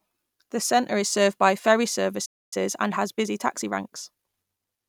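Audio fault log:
2.25–2.53 s, playback stall: right after "is served by ferry" the speech cuts out for about a quarter second, likely the player starving for data or its thread getting blocked.
2.53–4.27 s, time-compressed catch-up: the speech then runs about 1.15 times fast at normal pitch, as small pieces are trimmed and cross-faded to clear the backlog.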